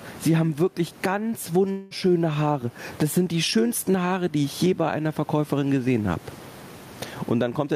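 Speech recorded with gain pumping running through the whole clip, with a gain swing of around 15 dB; the background noise sits about 35 dB below the speech. That pattern and the flattened difference between loud and quiet passages point most likely to input gain set far too high, with a fast limiter or compressor clamping down on each peak and releasing in the gaps. At 1.71 s, right after "haben wirklich ganz", there is a long network dropout lasting until 1.93 s. Roughly 200 ms of the signal never arrives, and the receiver fills about 190 ms of that gap by extending the last sound into a fading buzz or hiss, with no stretch of true silence before the speech resumes. The jump in the sentence at that point is the audible sign of the lost segment, most likely caused by packet loss on the network path.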